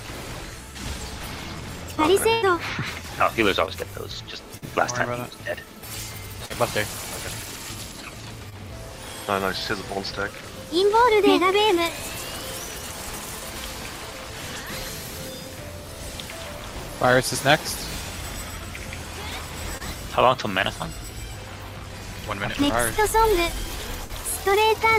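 At 2.33 to 2.44 s there is a burst of packet loss. About 80 ms of audio never arrived. The receiver stretched the last sound for about 85 ms and faded it. A held buzz or fading hiss results, then the audio jumps ahead.

Short concealed packet loss follows at 3.66 to 3.69, 4.57 to 4.64, 6.46 to 6.52, 8.50 to 8.54 and 19.78 to 19.82 s. Each gap is 20 or 40 ms, which fits 20 ms packets. Each was patched from the preceding sound and blended back. Each is a brief smear or wobble.

At 24.04 to 24.11 s a second burst of packet loss drops about 60 ms. A fading tail of about 53 ms covers it before the audio resumes further on.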